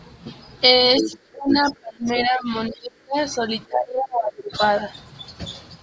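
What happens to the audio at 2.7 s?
The echo canceller likely mistook double talk for loudspeaker echo and suppressed both. From 2.68 to 3.16 s the speech is pulled down hard, by about 30 dB at its deepest: speech suppressed in double talk.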